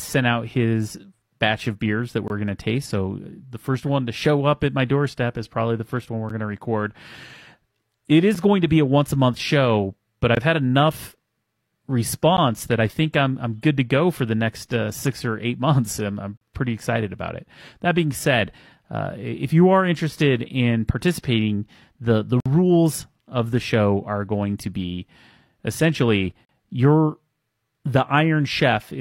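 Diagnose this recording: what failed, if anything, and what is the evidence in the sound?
Playback stage: gaps between stream segments. Hard-edged silences at 2.28–2.30, 6.29, 8.35, 10.35, 12.37, 16.37–16.41, 22.40–22.46 and 26.45–26.49 s fall on 2-second segment boundaries, where mismatched timestamps leave 7 to 54 ms holes filled with silence.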